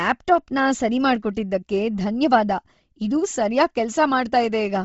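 Speech sounds breathy and grainy throughout, with nothing above 7.7 kHz. The heavy damage is likely Bluetooth LC3 compression at a low bitrate, consistent with about 24 kb/s.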